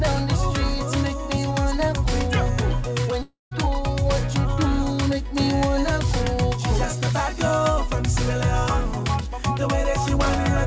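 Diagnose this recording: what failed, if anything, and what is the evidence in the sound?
The network stage most likely suffered a long network dropout, with packets ceasing to arrive from 3.22 to 3.53 s. The receiver's concealment stretches the last sound into a fading buzz that dies to silence for 160 ms, and audio resumes with about 300 ms lost.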